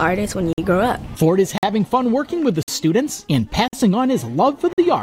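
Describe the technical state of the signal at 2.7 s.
Right around 2.7 s there is a gap between chunks: a 50 ms hole of silence from 2.63 to 2.68 s where one 1.0 s block ends and the next starts late. It sounds like a brief hard-edged dropout, and it shows as a flat waveform and a blank vertical stripe on a spectrogram.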